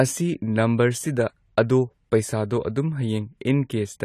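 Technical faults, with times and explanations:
Throughout, AAC compression: there is plainly audible codec damage, with nothing above 14 kHz and a dull, smeared, warbling sound. This is likely AAC-LC coding at a rate fitting 32 kbps, which lowers the cut-off and quantises the remaining bands coarsely.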